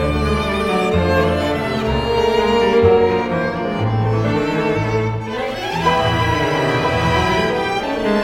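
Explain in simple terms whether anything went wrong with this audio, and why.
Nothing went wrong technically with this music: the signal stays steady and intact the whole way, with no breaks, jumps or distortion to be heard.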